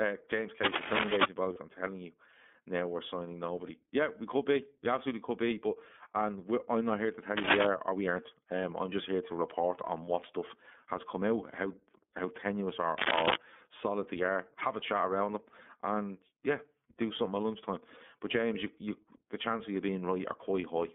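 Throughout, the speech sounds thin, rough and slightly synthetic, confined to roughly 200 Hz to 3.5 kHz. This is plainly audible iLBC codec damage, with 30 ms frames coded independently, which fits the 13.33 kbps mode.

From 0.63 to 1.28 s, a rustling scratch sits roughly 5 dB above the speech. This is cable scratch noise, likely from a worn cable or connector being moved and briefly varying the contact.

At 1.53 s, just before "I'm telling you now", there is a brief held, buzzy vowel-like smear. These are lost iLBC frames, which fits a single 30 ms frame concealed by repeating the last pitch cycle.

The same scratching returns from 7.37 to 7.67 s, between "not here to tell" and "or we aren't", and again from 12.96 to 13.36 s, between "out how how tenuous" and "solid they are".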